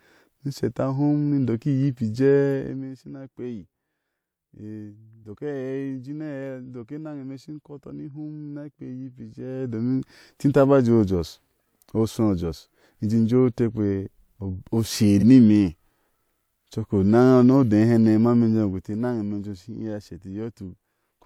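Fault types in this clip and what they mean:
Repeated frames: One compressed frame of about 42.7 ms, a length that fits 2048-sample frames at 48 kHz, was written or sent twice, so the decoder played that slice of speech once more than it should have. At 15.19 to 15.23 s a brief fragment of the speech plays again, heard as a tiny stutter. The clip runs 42.7 ms longer as a result.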